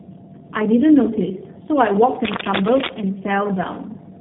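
Throughout, the speech shows tandem speech coding: it sounds rough, muffled and warbly, which points to two low-rate G.729A-type coding stages in a row. A spectrogram shows nothing above 3.7 kHz and smeared, unstable harmonics.

From 2.24 to 2.94 s, cable scratch noise sits over the speech, likely from a worn cable or connector being moved. It is a dense, uneven scratching, somewhat louder than the speech. The waveform shows jagged bursts, and the spectrogram shows broadband vertical streaks.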